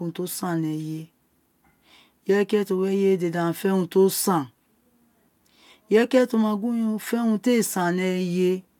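Nothing stood out as a technical fault on listening to this recording of speech.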